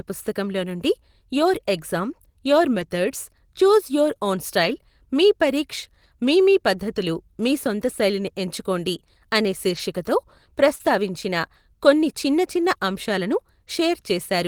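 At 2.79 to 2.81 s, just after "నుండి యోర్ ఎగ్జామ్ యోర్", comes the first lost packet rebuilt from error correction. The packet went missing. The next one carried a low-bitrate copy, and the decoder played that instead. There is no gap, but the sound turns briefly rough and noisy. The same happens at 4.63 to 4.73 s, between "చూజ్ యోర్ ఓన్" and "మీ పరీక్ష్ మీ మీ". That 60 ms patch fits three separate lost packets. It recurs at 6.97 to 6.99 s. At 9.69 to 9.79 s, after "సొంత శైలిని ఎంచుకోండి అనే", there is another 60 ms rebuild.

At 10.75 to 10.81 s there is a short concealed packet loss. About 40 ms never arrived in time. The receiver extended the preceding sound to cover the hole, then blended back into the real signal. It is heard as a brief smear. An error-correction rebuild overlaps its end at 10.79 to 10.81 s, adding grain as the audio recovers. A final 20 ms rebuild at 12.61 to 12.63 s gives one more short rough spot.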